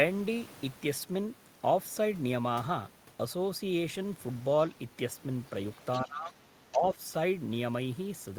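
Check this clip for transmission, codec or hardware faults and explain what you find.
Two related faults appear in the second half of the speech, both pointing to an echo canceller struggling on the talker's speakerphone path.

Other side's voice leaking through occurs from 5.93 to 6.01 s and again from 6.72 to 6.78 s. A faint second voice sits under the talker, about 15 dB below the speech in the first instance and about 20 dB below in the second. The likely cause is loudspeaker output reaching the microphone and surviving incomplete echo cancellation. Both scraps are very brief.

Speech suppressed in double talk follows from 6.05 to 6.43 s and from 6.71 to 6.98 s, overlapping the second leak. The talker's level sinks, by about 20 dB at the deepest point in the first stretch and about 10 dB in the second. Together the dips cover about 0.6 s. This is likely the canceller treating simultaneous speech from both sides as echo and attenuating everything. 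The voice ducks, then recovers.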